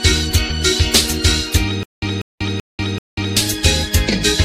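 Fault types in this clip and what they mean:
Stutter with silent gaps: from 1.83 to 3.37 s a 193 ms burst repeats four times, each followed by 191 ms of digital silence, a 384 ms cycle. This is likely a stalled stream replaying its last fragment. Waveform and spectrogram show identical blocks alternating with flat, empty gaps.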